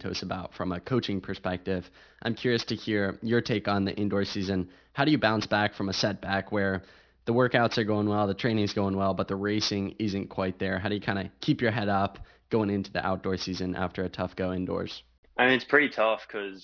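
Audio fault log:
Throughout: aliasing. The speech was taken down to a lower sample rate without an adequate anti-alias filter first, so content that sat above the new Nyquist limit reflects back around a fold point of 5.5 kHz instead of being removed. The mirrored energy lands at unrelated frequencies, making sibilants and fricatives sound gritty and metallic. The spectrum runs hard up to the band edge, which fits a target rate near 11 kHz, with the folded components sitting about 15 dB below the speech.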